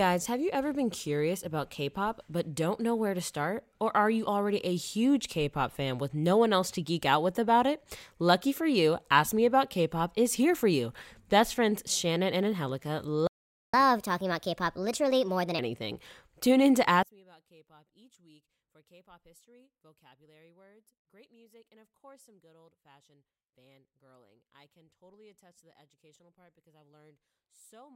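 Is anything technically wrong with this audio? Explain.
Yes, three faults are audible in this speech recording.

At 13.27 s the audio cuts out in a playback stall lasting about 0.46 s, until 13.74 s. The player most likely ran dry of buffered data or had its output thread held up, so nothing reached the output for that interval. The speech simply drops to silence in mid-flow and then resumes, leaving a clear hole in the delivery.

From 13.74 s to 15.59 s there is catch-up at higher speed. Having fallen behind during the stall, the player works through its backlog by resampling at 1.25 times normal rate, which shortens the material but also raises its pitch, by roughly four semitones. For nearly two seconds the speech sounds hurried and noticeably higher, then settles back to its normal speed and pitch once the lost time is recovered.

From 17.03 s, just after "in to", to the end, the audio behaves as though one channel is inverted. 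The likely cause is a polarity flip on one stereo side, so that when the two channels are combined to mono the shared content cancels. The centred speech falls by about 31 dB, leaving only a faint residue of whatever differs between the channels for the rest of the clip.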